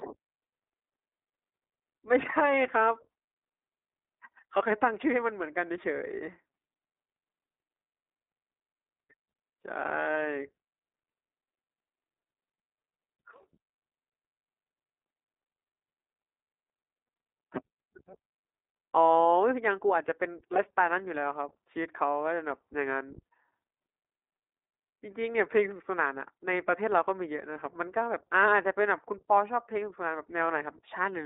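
Throughout, the speech sounds narrow, slightly rough and synthetic, confined to roughly 300 Hz to 3.7 kHz. This is iLBC codec damage, which fits its 15.2 kbps mode.

At 20.54 s and 27.54 s, brief buzzy, held-vowel blips appear. These are lost iLBC frames, each about a 20 ms frame the decoder filled by repeating the last pitch cycle.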